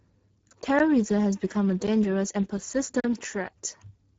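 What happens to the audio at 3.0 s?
At 3.00 s the speech drops into a block of digital silence lasting until 3.04 s, about 40 ms. The sound cuts straight to silence and back with no fade, leaving a short hole, which points to an output buffer not being filled in time.

Across this moment the speech also carries plainly audible Speex codec damage at 9.8 kbps. The CELP coder has too few bits for its excitation, which leaves the speech hoarse and noisy, and the band stops at about 7.8 kHz.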